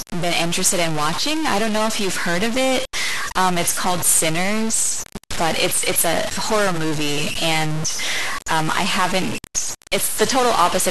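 All the way through, the speech carries a harsh, buzzy grit, and even the pauses fill with noise. That's likely a stuck bit, worth roughly -20 dBFS.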